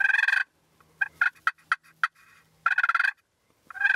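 Listening through the clip, nothing stood out as a technical problem at any point.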